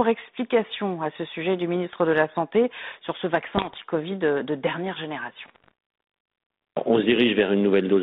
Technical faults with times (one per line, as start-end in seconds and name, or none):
3.56-3.76 bit errors on an ADPCM link
5.40-5.72 bit errors on an ADPCM link